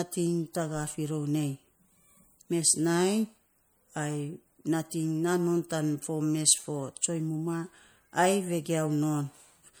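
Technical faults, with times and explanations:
Throughout, MP3 compression: the speech has a plainly audible watery, swirly quality, with the s sounds turning metallic and chirpy and the edges of consonants smeared. That's likely an MP3 encode starved of bits, which fits something around 64 kbps. The encoder keeps dropping quieter frequency lines and letting them pop back frame to frame, so detail flickers. The top end still reaches about 21.1 kHz, though.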